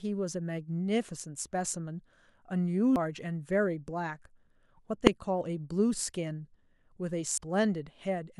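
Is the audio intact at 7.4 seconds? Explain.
No. Damaged data in the compressed stream at about 7.38 s makes the decoder lose sync and search for the next frame header, giving a brief chirp, squawk, click or short hole.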